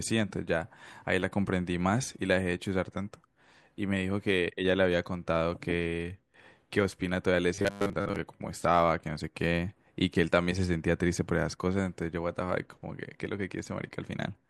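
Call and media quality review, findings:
Robotic sound from repeated short buffers, 7.55–8.19 s. Speech becomes a rigid metallic buzz at 100 Hz, loosely following the words. Likely jitter-buffer underrun: a roughly 10 ms chunk replayed through most of the span, real audio skipped.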